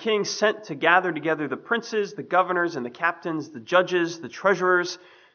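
No technical faults are audible anywhere in the audio.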